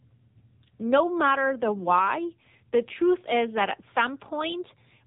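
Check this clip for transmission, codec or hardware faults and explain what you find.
The clip carries one fault, and it runs throughout.

AMR narrowband mobile codec damage, from start to finish: the speech has passed through the AMR-NB mobile codec, which resamples to 8 kHz and rebuilds the voice from a vocal-tract model excited by sparse pulses. Nothing above about 3.8 kHz survives, so sibilants and consonant edges are dull. The heavy buzzy, synthetic coloration points to a low bitrate mode, which fits roughly 6.7 kbps.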